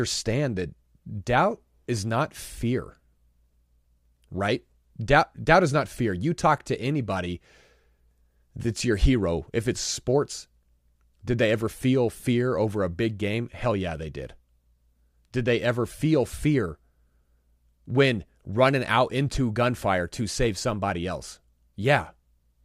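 No audible technical faults.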